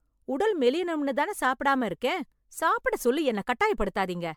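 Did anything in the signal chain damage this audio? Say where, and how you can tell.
Yes, at the codec stage, and the damage runs through the whole clip. The speech has a swirly, hollow, smeared quality with blurred consonant attacks, which points to generation loss, most likely from around seven repeated MP3 passes at about 128 kbit/s. Each re-encode quantises on a shifted frame grid, so the noise and spectral holes pile up. A single encode at that rate would sound far cleaner and keep crisper attacks. The band stops near 19.9 kHz.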